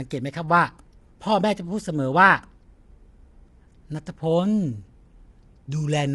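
Across the whole speech recording the voice sounds rough and grainy. The likely cause is low-delay AAC compression at a low bitrate: its coarse coding puts noise between the pitch harmonics. A spectrogram shows noise between the harmonics and nothing above 11.5 kHz.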